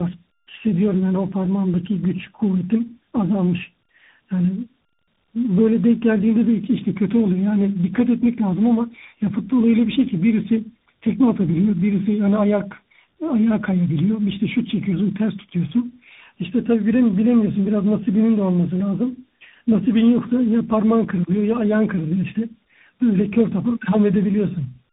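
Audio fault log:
throughout, tandem speech coding: speech is coded twice in a row, pointing to AMR-NB then CVSD, each coder working on the last one's degraded output. Rougher and warblier than one codec alone, with nothing above 3.8 kHz.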